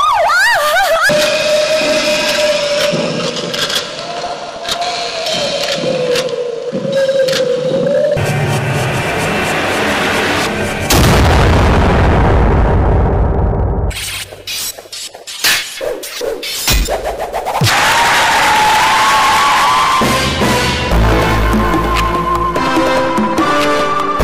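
DAB burbling appears at 4.12–4.72 s, 8.93–9.39 s and 20.75–20.98 s. Residual bit errors, around a few tenths of a percent, slip past error correction and corrupt MP2 samples and scale factors, causing short blips of noise and sudden level jumps in single sub-bands. On a spectrogram these show as brief, isolated blocks flaring in single frequency bands.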